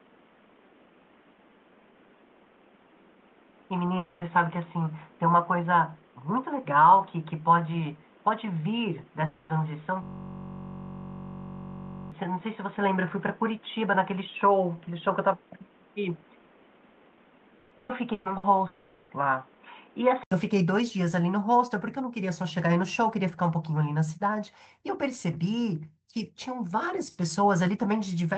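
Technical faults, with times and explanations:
0.00–20.32 s, input switched to a poorer device: sound is dull, nothing above 3.8 kHz, with noise about 30 dB down; likely a lesser microphone, clearing after an 80 ms silence.
3.97–4.24 s, 9.25–9.52 s, 18.67–19.12 s, long network dropout: audio likely stopped arriving; each hole, 240, 240 and 420 ms, is filled by a fading smear of the last sound, then resumes past the lost part.
10.03–12.12 s, system hang loop: a 21.33 ms fragment repeats 98 times, giving a steady 46.9 Hz buzz that fits a 1024-sample buffer; about 2 s of audio is lost.
17.59–18.46 s, repeated packet loss (robotic sound): four gaps, the longest 120 ms, are patched by stretching prior sound, so nearly half the stretch turns choppy.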